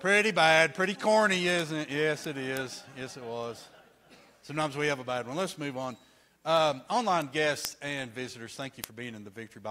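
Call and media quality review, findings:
Word clock ticks from 0.19 s to end: sharp single-sample ticks, uneven strength, roughly every 0.1 s, about 100 total. Receiver free-running on own clock, not locked to digital source; drift near 200 ppm forces periodic sample drop or repeat at each slip.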